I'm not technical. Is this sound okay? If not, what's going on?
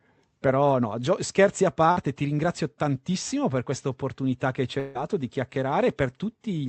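No. At 1.91 to 2.03 s, right after "scherzi a" and before "ti ringrazio tantissimo per", there is a burst of packet loss. A short run of data never arrived, so the receiver stretched the last sound for about 50 ms, and about 40 ms of speech is simply missing.

At 4.79 to 4.97 s, after "questa opportunità che ci", the speech turns into a fading buzz for about 160 ms with no true silence, and that much of the speech is gone. This is likely a long network dropout.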